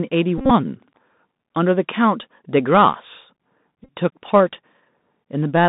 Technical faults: Bluetooth CVSD headset codec; Bluetooth headset packet repeated; processor overload crackle

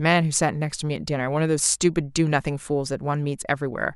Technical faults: none

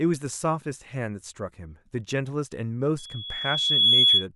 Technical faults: loudspeaker feedback squeal

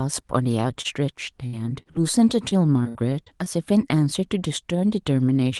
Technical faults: short concealed packet loss; burst of packet loss; repeated packet loss (robotic sound)

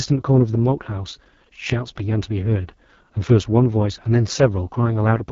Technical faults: AMR wideband (HD Voice) codec

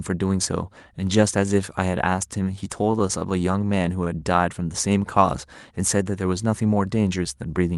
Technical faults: repeated stalls (stutter)

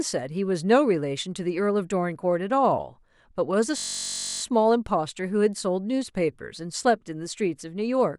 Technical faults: system hang loop

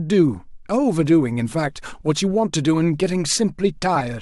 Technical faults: compressed frames skipped

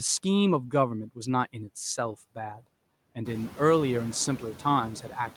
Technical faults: noise suppressor artifacts; clock drift between sender and receiver; repeated timing corrections

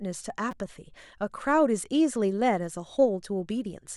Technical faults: repeated buffer

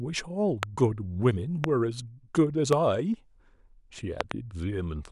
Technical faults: loud pop

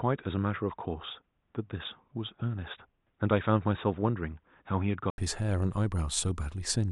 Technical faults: input switched to a poorer device

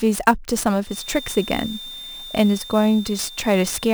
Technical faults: sample clock jitter; feedback whistle

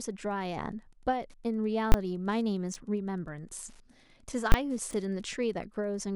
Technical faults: Wi-Fi interference; invalid numbers at full scale; chunks out of order

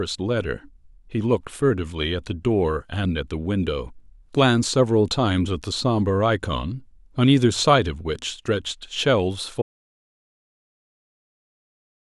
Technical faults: audio dropout to silence

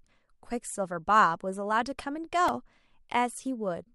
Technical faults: repeated buffer

